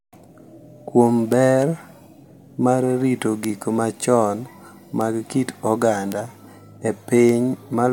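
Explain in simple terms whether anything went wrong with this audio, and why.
Bit error spikes at 1.32, 3.44, 5.01, 6.12 and 7.29 seconds: each is a single sharp tick in the speech. A flipped bit in the digital data made one or two samples jump far from their true value and snap straight back, causing a click unrelated to the sound.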